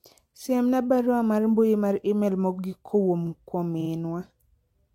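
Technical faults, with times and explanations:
3.77–3.87 s, repeated frames: the speech catches and stutters, with the same tiny slice of sound sounding three times in quick succession. A single compressed block of about 46 ms appears to have been written or sent more than once, so the decoder replays it twice more. This lengthens the clip by roughly 93 ms.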